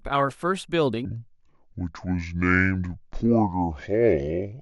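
Playback likely ran off the wrong clock from 1.05 s to 4.62 s, leaving a section at the wrong speed, 0.629 times the recorded rate. The speech turns slow and deep there, its pitch dropping by roughly seven semitones.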